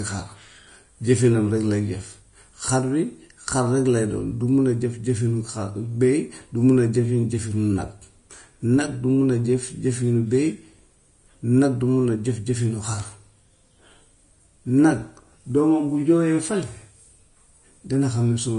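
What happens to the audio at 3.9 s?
At 3.9 s the speech carries the same damage as the whole clip, likely Vorbis compression: treble is coarsely quantised into grainy hiss and nothing sits above 10.5 kHz, which fits a low bitrate around 33 kbps. A spectrogram shows a flat ceiling there and smeared, speckled upper bands.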